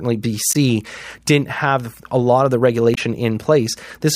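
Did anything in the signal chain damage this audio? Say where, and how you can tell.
Yes. Damaged data in the compressed stream produces brief glitches at 0.52–0.56 s and 2.94–2.98 s, just after "a lot of the". Corrupted bytes there made the codec misdecode frames and lose sync until it found the next valid frame header.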